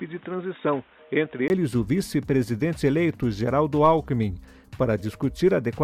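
The first 1.5 seconds sound dull and boxy. Nothing comes through above 3.8 kHz. At 1.5 s there is a brief gap of about 20 ms. After it the sound opens up to full bandwidth. The loudness barely changes across the switch. The muffled opening also carries its own background noise, roughly 35 dB below the signal. This is likely an input switched to a poorer device, such as a headset in its call profile, before the system returned to the better microphone.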